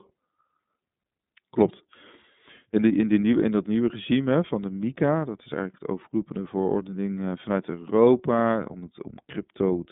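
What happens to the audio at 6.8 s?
At 6.8 s you're hearing the iLBC codec, which runs through the whole clip rather than showing up at that moment. The speech is squeezed into a telephone band of roughly 150 Hz to 3.7 kHz, with nothing above 3.8 kHz, so it sounds boxed-in and dull. Each 30 ms frame is coded on its own, which fits the 13.33 kbps mode, and that leaves a plainly audible rough, slightly synthetic grain on the speech.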